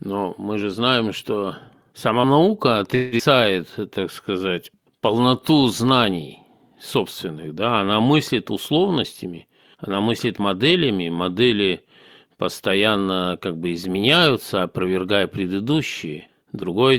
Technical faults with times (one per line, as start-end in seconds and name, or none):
2.95-3.22 long network dropout
3.81-4.97 jitter buffer slow-down
9.25-10.75 jitter buffer speed-up
16.10-16.69 jitter buffer speed-up